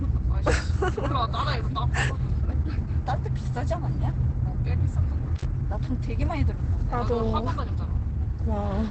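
Throughout the clip, the sound is muffled and hoarse, with nothing above about 8.5 kHz and a heavy, rasping texture. That points to Opus compression, likely in its speech-oriented SILK mode at a wideband setting, which fits a bitrate near 12 kbps. Band-folded CELT coding would sound grainy and noisy at full width. This clip instead sounds dull and throaty, the sign of the encoder abandoning its music path entirely.

At 5.36 s comes an intermittent contact. The signal cuts out for about 44 ms, and the whole event runs to 5.45 s. A crackle marks the break and the reconnection, and a faint hiss remains while the line is open. The crackle at each edge and the hiss in the gap set it apart from a clean digital dropout, which falls to silence without those edge artefacts.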